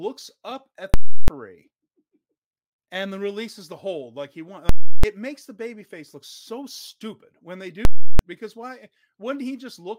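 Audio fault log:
0.94–1.28 s, 4.69–5.04 s, 7.85–8.19 s: invalid numbers at full scale. After "up at", "the hold like he" and "so stupid when they", invalid values pin the output at one extreme value for about 341 ms, fitting a 16384-sample block. A loud pop starts and ends each block, with silence between.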